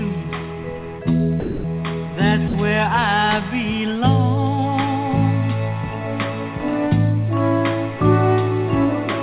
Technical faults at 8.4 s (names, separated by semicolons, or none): none